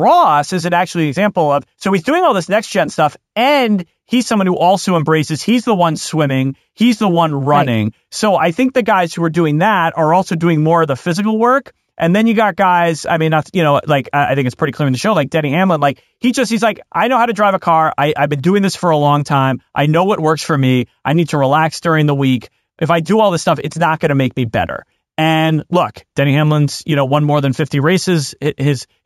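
The speech was upsampled by straight-line interpolation between samples, which fits a conversion from 16 kHz to 48 kHz. This imaging from linear upsampling lasts the whole clip, dulling the top of the band and leaving faint mirror images from 8 to 16 kHz, roughly 30 dB down, heard as a light metallic shimmer on sibilants.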